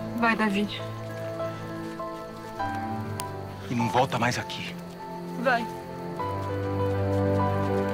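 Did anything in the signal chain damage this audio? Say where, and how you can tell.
Yes, a sharp click of digital noise at 3.2 s, lasting under a millisecond, comes from an uninitialised buffer at the driver or buffer stage, consistent with one 32-sample block of leftover memory.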